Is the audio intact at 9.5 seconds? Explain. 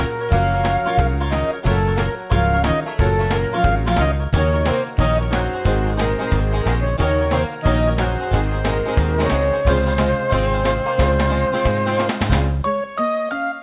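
Yes, the audio at 9.5 s is intact, with nothing disrupting it at that moment beyond the narrow band of the G.711 call path, which carries nothing above 4 kHz.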